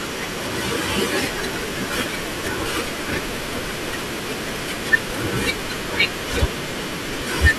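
No technical faults can be heard anywhere in the recording.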